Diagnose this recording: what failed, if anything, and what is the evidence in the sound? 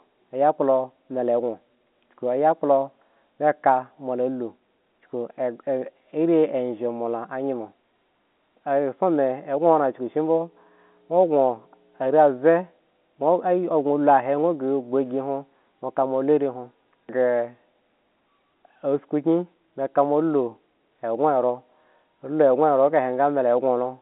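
Mains hum from the analogue wiring stage appears from 9.19 to 12.07 s as a steady 60 Hz tone about 25 dB below the speech, as a ground loop or nearby transformer couples the power line into the signal. A spectrogram shows a flat horizontal line at 60 Hz for those three seconds, well below the G.711 telephone band's ceiling near 3.8 kHz.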